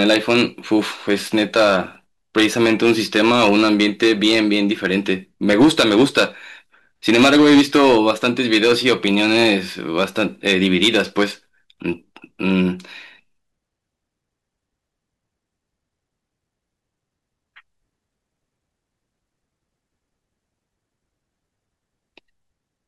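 A stage in the speech chain is being driven past its ceiling, so the peaks are sliced flat by hard clipping in five stretches: 0.01 to 1.76 s, 2.37 to 5.13 s, 5.49 to 6.25 s, 7.09 to 9.54 s and 9.97 to 11.24 s. The overload runs about 7 to 10 dB, worst near 5.5 s. The squared-off peaks add high harmonics, heard as a harsh fuzz over each loud syllable.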